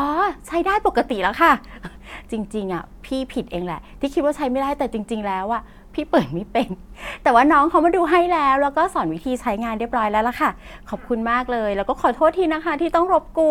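Nothing in this speech recording stood out as a technical problem on listening.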